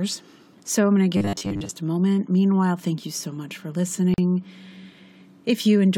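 A rigid, metallic buzz runs through this speech from 1.17 to 1.71 s, pinned at a steady 100 Hz while the sound underneath still roughly tracks the talking. This is robotic sound from repeated short buffers, likely from audio arriving too seldom, so the last 10 ms were replayed through most of that stretch while the real audio was skipped. Later, a 41 ms gap cuts into continuous sound from 4.14 to 4.18 s, then the speech resumes where it stopped: a gap at a join of encoded pieces, where separately encoded segments kept their start delay and end padding.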